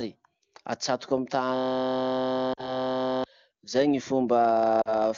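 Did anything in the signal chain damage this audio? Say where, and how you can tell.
Yes. The driver or buffer stage caused a system hang loop from 1.56 to 3.24 s. A 23.22 ms slice repeats at 43.1 Hz, heard as a steady buzz. The host stalled while the hardware kept replaying its ring buffer, which fits a 1024-sample buffer.

The network stage caused lost AMR speech frames at 2.53 to 2.76 s and again at 4.82 to 4.95 s. Each loss covers 40 ms. The wideband decoder filled the gaps by reusing the last good pitch and vocal tract parameters at falling gain. This gives a short drop to near silence.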